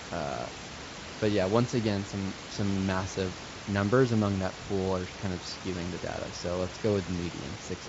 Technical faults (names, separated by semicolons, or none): none